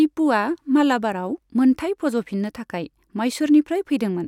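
Dropped samples at 0.54 s, just before "मालाबारआव मोनथाई फज'फिननो थाखाइ" in this speech recording, produce a single sharp click, seen as a thin vertical line across the spectrum. The likely cause is a handful of samples, well under a millisecond's worth, going missing from the stream, so the waveform leaps straight from one value to a later one. That step is too brief to remove any audible sound, but the abrupt discontinuity is heard as the click.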